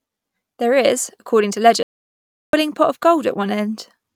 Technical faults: audio dropout to silence

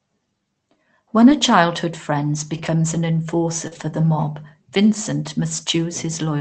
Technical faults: lost packet rebuilt from error correction; short concealed packet loss

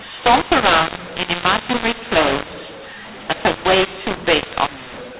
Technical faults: mu-law and A-law mixed up

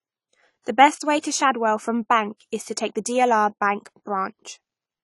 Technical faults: AAC compression; pre-echo

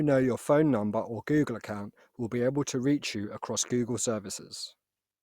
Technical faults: none

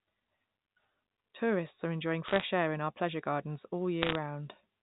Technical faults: bit errors on a digital phone line

